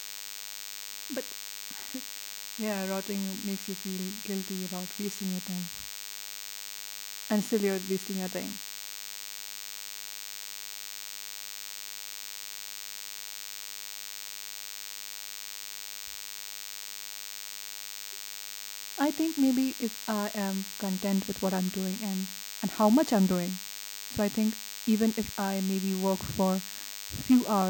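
A DECT cordless phone buzz runs under the speech from start to finish. A nearby DECT handset or base is pulsing every 10 ms, and the audio circuitry rectifies those bursts into a thin, harmonically rich 100 Hz buzz that sits only about 10 dB below the speech.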